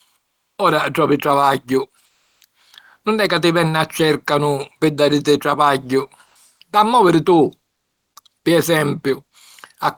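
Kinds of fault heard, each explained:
comfort noise in place of the background: in two pauses, after "ora trovi travagghiu" and "pi dàriti travagghiu", the background turns smooth and featureless, likely discontinuous transmission substituting synthetic noise.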